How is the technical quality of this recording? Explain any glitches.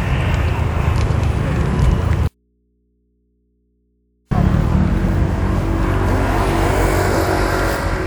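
The recording has one clear glitch: an audio dropout to a faint residue from 2.28 to 4.31 s. The sound cuts abruptly for about 2 seconds, leaving only mains hum roughly 45 dB down. The likely cause is a signal break upstream while the input stayed live.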